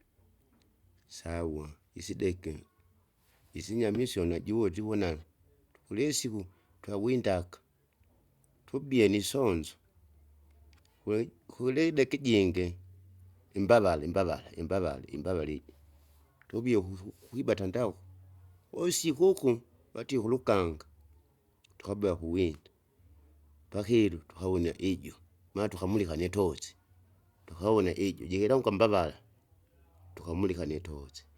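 No technical faults occur at any point in the recording, so there is nothing to place in time order.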